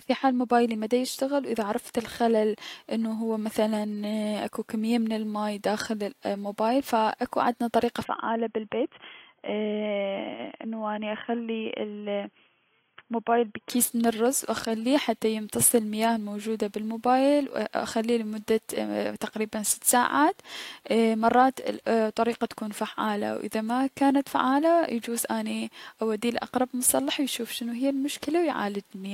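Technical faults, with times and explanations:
8.04 to 13.70 s, input switched to a poorer device: Just after "ف اكو عدنا طريقة", the speech turns dull and boxy. Nothing remains above 3.3 kHz, so the sibilants and airy top end vanish. There is no gap at the change and no real jump in loudness. A faint new noise floor sits roughly 50 dB under the speech. This likely comes from the input moving to a narrower-band microphone or headset profile. Full clarity returns at "من الرز و اخليه".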